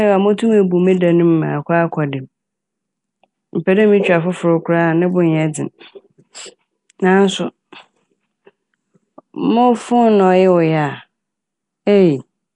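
Throughout the speech, there is a rough, hissy halo and a smeared, underwater quality, with nothing above 10.6 kHz. This is likely Nellymoser compression, whose starved bands get filled with noise.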